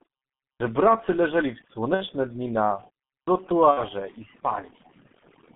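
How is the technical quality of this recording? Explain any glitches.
Pretty rough, honestly; it sounds like a heavily processed phone call. The overdone noise removal runs throughout. It's set so aggressively that bands near the noise floor get gated out, leaving twinkly specks.

The G.723.1 codec is also there for the whole clip. The band sits around 150 Hz to 3.5 kHz, and the muffled, hoarse, smeared consonants suggest a rate near 6 kbit/s.

VoIP packet loss concealed by the speech codec hits twice, at 1.94 to 2.06 s and at 3.71 to 3.82 s. Each gap lasts about 60 ms, which fits two lost 30 ms frames. The decoder stretches the last sound into a fading buzzy tone or coloured noise, and the voice stays weak briefly afterward.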